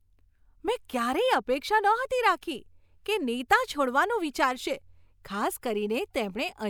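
No technical faults can be heard anywhere in this speech recording.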